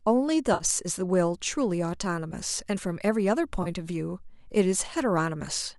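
AAC frame loss with concealment occurs from 0.54 to 0.64 s (60 ms, fitting six 10 ms frames) and 3.63 to 3.68 s (30 ms), where the decoder rebuilds missing frames from prior spectra, leaving smeared, noisy patches. The short frames are likely from low-delay AAC.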